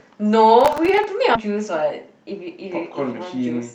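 From 0.61 to 1.04 s, processor overload crackle rides on the speech. Tiny buffers, around 1.5 ms each, miss their deadlines repeatedly. Each gets refilled with stale audio, producing gritty clicks.

At 1.35 s, a skip ahead drops roughly a third of a second. Playback jumps straight to later speech, with the two sides joined almost seamlessly.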